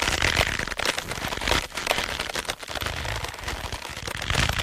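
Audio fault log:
0.87 to 3.98 s, digital radio blending to analogue: the receiver loses its digital stream and cross-fades over about 149 ms into the FM analogue broadcast of the same station, returning the same way at 3.98 s. While on FM the level drops by about 1 dB and broadband hiss rises to roughly 30 dB below the signal. On a spectrogram this appears as a raised noise floor spanning the band between the two short transitions; the waveform shows a slight amplitude dip there.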